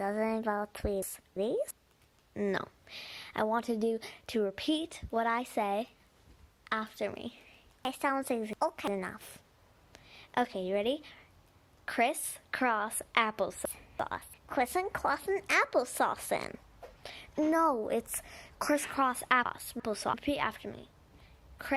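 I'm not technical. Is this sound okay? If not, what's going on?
No. There are chunks out of order at 1.02–1.71 s, 7.85–8.88 s, 13.65–14.34 s and 19.46–20.14 s. A 0.34-second piece arrived late and plays after the piece meant to follow it, two pieces late at 7.85 s, so each spot sounds jumbled.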